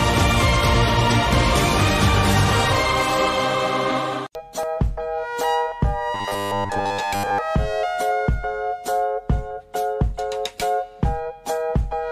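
From 6.14 to 7.38 s, robotic sound from repeated short buffers: a rigid 100 Hz buzz, likely from 10 ms chunks looping over most of the audio, unlike random dropout clicks.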